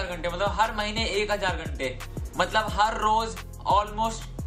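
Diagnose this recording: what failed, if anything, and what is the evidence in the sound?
Clock drift between sender and receiver runs throughout, a buffer-stage fault. The sender's clock runs about 2% slow, so the receiver's jitter buffer keeps draining.

Repeated timing corrections run from 0.08 to 4.44 s. The receiver repeats short pieces to keep pace, playing at 97% speed and adding about a tenth of a second.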